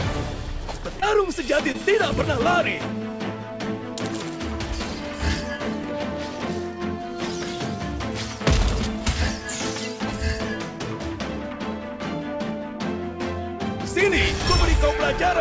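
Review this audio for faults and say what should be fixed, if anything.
Two brief smears, at 1.00 to 1.04 s and 1.72 to 1.76 s, are short concealed packet loss. Each time about 20 ms of audio reached the decoder too late, and the receiver bridged the gap by extending the preceding sound before blending back into the real signal. The audio stops at 8 kHz, which fits a wideband call codec. To prevent the losses, give the jitter buffer more headroom or add forward error correction so that lost packets can be rebuilt.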